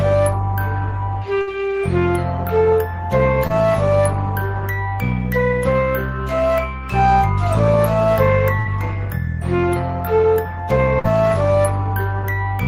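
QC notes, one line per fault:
1.41–1.49 s, burst of packet loss: the sound is held and fades for about 55 ms, then resumes with roughly 60 ms skipped, as consecutive packets were lost or arrived too late.
3.47–3.52 s, short concealed packet loss: a brief smear lasting about 27 ms, where the receiver extended the previous sound to cover roughly 20 ms of lost audio.
8.60–8.67 s, burst of packet loss: a held, fading stretch of about 54 ms before playback jumps ahead, with around 60 ms of audio lost.
10.99–11.06 s, burst of packet loss: about 50 ms of continued, fading sound, then a resumption with roughly 40 ms missing from the stream.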